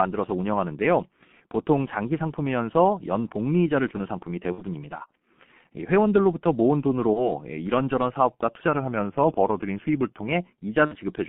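G.723.1 codec damage runs through the whole speech clip: the audio is held to a telephone band of roughly 150 Hz to 3.4 kHz at 6.3 kbit/s, and the damage is heavy. The codec rebuilds each 30 ms frame from a coarse, slowly updated voice model, so nothing above the band survives. The result is a muffled, hoarse tone with blurred consonants. VoIP packet loss concealed by the speech codec occurs at 4.52 to 4.62 s (two frames, 60 ms lost), at 7.13 to 7.32 s (one frame, 30 ms) and at 10.86 to 10.97 s (two frames, 60 ms). At each gap the decoder carries on from its last pitch and filter settings with falling gain, so the sound smears into a fading buzzy tone or coloured noise. Each frame builds on the previous one, so the damage lasts beyond the lost packets themselves, which is why the audible disturbances run longer than the missing audio. From 8.68 to 10.29 s, the speech plays about 5.6% slower and drops a full semitone (100 cents) in pitch, then returns to normal. 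Speed and pitch moving together like this point to a drift correction step, most likely clock-matching software retuning the playback rate in one abrupt jump to manage its buffer, far beyond the tiny adjustments such correction normally makes.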